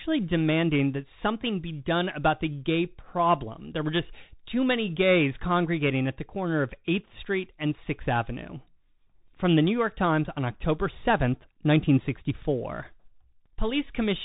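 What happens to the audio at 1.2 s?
At 1.2 s the speech is going through a Bluetooth CVSD headset codec, which affects the whole clip rather than that moment alone. CVSD sends one bit per sample saying up or down, with an adapting step size. That fits a 64 kbps stream. Nothing above 3.8 kHz survives, so the speech sounds narrow and muffled. Loud high-pitched parts outrun the step and distort. S sounds turn scratchy, and a grainy hiss sits underneath.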